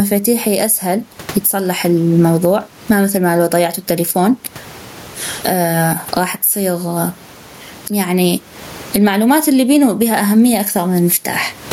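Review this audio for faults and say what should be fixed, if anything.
Gain pumping runs through the whole clip. The room noise sits about 41 dB below the speech, and the gain swings by around 25 dB, pulling down under every loud sound. The likely cause is microphone gain set far too high, with a fast limiter pulling it down on each peak. Lower the input gain so the limiter rarely needs to act.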